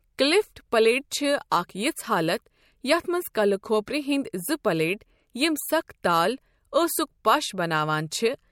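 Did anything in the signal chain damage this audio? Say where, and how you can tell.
Yes. Brief hiss smears the attacks at 1.10 s (before "چھِ اکھ یِژھ حالت"), 1.50 s (before "اکھ یِژھ حالت"), 3.34, 3.86 and 8.10 s. This is codec pre-echo: quantisation noise, about 11 to 18 dB up, spreads ahead of each onset. That fits roughly 26 ms transform blocks with no short-block switching.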